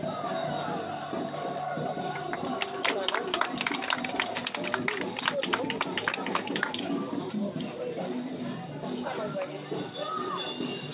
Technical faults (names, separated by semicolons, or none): none